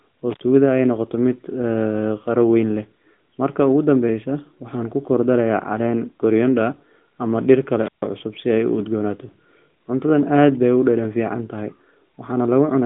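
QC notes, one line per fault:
0.30–0.43 s intermittent contact: a loose connection opens for about 72 ms, so the sound cuts out with crackle at both edges and faint hiss between. The waveform shows a near-flat gap bracketed by sharp spikes. The spectrogram shows an empty column with broadband vertical click lines.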